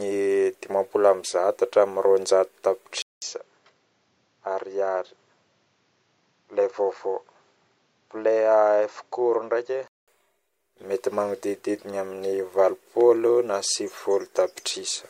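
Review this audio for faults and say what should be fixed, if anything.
At 3.02 s the speech cuts out for 200 ms and returns duller and a few decibels quieter, with nothing above 7.6 kHz and a faint new noise floor well below it. Full brightness comes back at 10.08 s. That pattern is most likely an input switched to a poorer device: the recorder jumped to a narrower-band microphone with its own tone and noise, then switched back. Locking the input device before recording prevents this.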